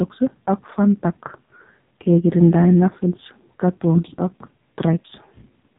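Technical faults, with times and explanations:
Throughout, AMR narrowband mobile codec: the speech is rebuilt from a coarse vocal-tract model, giving a buzzy, synthetic character whose heavy damage fits a bitrate near 5.9 kbps. A spectrogram shows a hard ceiling at 3.8 kHz, empty above.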